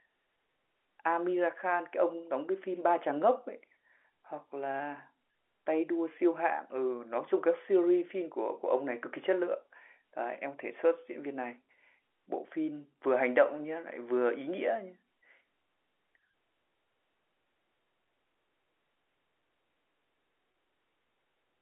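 Telephone speech, band-limited to roughly 300 Hz to 3.4 kHz by G.711 A-law coding, has one packet loss with pitch repetition at 20.52 to 20.54 s. The 20 ms gap, which fits one lost packet, is filled by repeating the last pitch period, giving a brief buzzy hold. On the waveform it shows as identical repeated cycles, and on the spectrogram as flat, unchanging harmonics.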